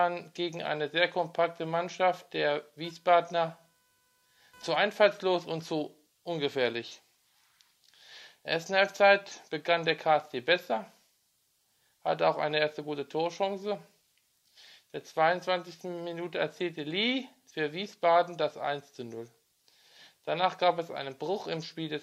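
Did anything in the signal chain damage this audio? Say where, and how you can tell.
Yes, computer activity noise in the analogue wiring: a faint buzz around 500 Hz from 2.84 to 4.84 s, where computer load changes shift the shared ground.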